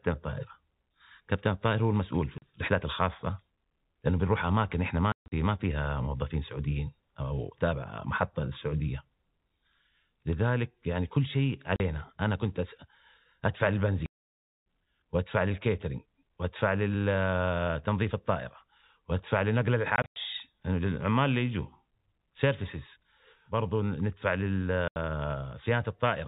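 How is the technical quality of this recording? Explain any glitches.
The speech is repeatedly chopped by dead silences with hard edges, the sign of packet loss filled with silence. Gaps fall at 2.38–2.42 s, 5.12–5.32 s (a scatter of holes, longest 140 ms), 11.76–11.80 s, 14.06–14.47 s (the longest break), 19.96–20.16 s (scattered, longest 100 ms) and 24.88–24.96 s. Lost packets were replaced with silence instead of concealed, so the waveform is cut abruptly. Gap lengths in 20 ms steps point to 20 ms packets. The narrow telephone-band sound of the G.711 coding stays consistent throughout.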